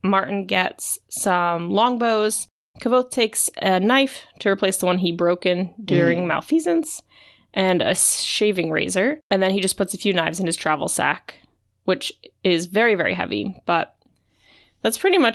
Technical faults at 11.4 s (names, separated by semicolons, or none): none